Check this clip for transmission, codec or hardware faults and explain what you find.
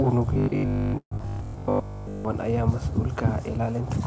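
Three faults are audible, all between 0.34 and 2.25 s of this speech clip, with the call's bandwidth ending at 8 kHz, which fits a G.722 codec at 64 kbps.

Robotic sound from repeated short buffers, 0.34 to 2.25 s: New audio likely arrived too seldom, so the receiver kept looping very short slices, each about 20 ms, in place of essentially all the real signal. That repetition imposes a rigid 50 Hz metallic buzz that only loosely tracks the speech.

Long network dropout, 0.98 to 1.22 s: A stretch of audio likely never reached the receiver. It covered about 213 ms by extending the last sound into a fading buzz or hiss, roughly 90 ms of audio is simply gone, and about 80 ms is near-silence. The delay afterwards shifts by around 70 ms.

Jitter buffer slow-down, 1.27 to 1.83 s: With its reserve running low or its target delay just raised, the receiver built up a reserve by repeating single pitch periods and pause fragments, adding 86 ms. 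Speech plays at 86% speed with unchanged pitch, so sounds are audibly drawn out.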